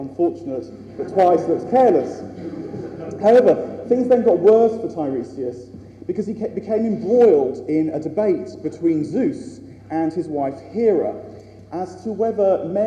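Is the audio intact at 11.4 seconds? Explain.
Yes, at 11.4 seconds the audio is intact, with no dropout, glitch or other technical fault at that point.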